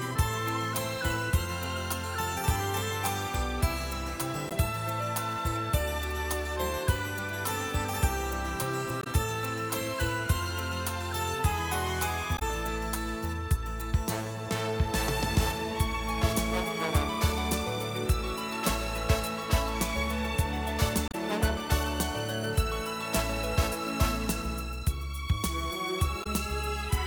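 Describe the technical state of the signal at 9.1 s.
Damaged data in a compressed stream sits just before 9.1 s, from 9.00 to 9.07 s. Part of the encoded stream there is corrupt, so the decoder misreads or discards the affected frames, loses its place in the bitstream and has to hunt for the next valid frame header before normal decoding resumes. For those roughly 70 ms the result is a brief chirp, squawk, click or short hole cutting into the sound.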